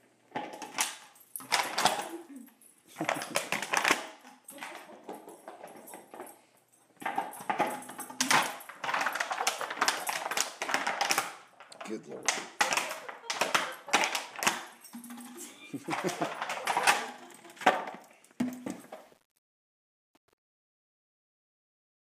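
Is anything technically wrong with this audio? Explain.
Yes. From 18.64 s to the end at 22.19 s, the fade-out suffers truncation distortion on a fade. The gain stage drops low bits without dither, which fits a 9-bit word length, so the waveform collapses into coarse steps. From 18.72 s the tail turns gritty.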